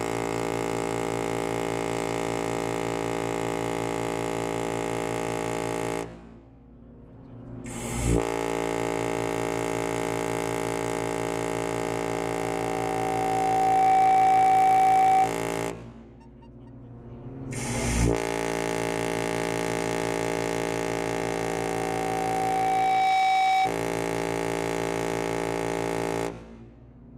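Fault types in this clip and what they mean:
Loudspeaker feedback squeal: a 762 Hz tone swells over about two seconds, twice. Unlike steady hum, it grows as the microphone re-amplifies the loudspeaker.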